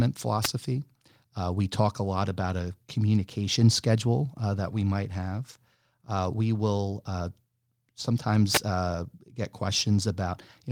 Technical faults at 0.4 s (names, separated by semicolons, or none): wireless microphone noise hit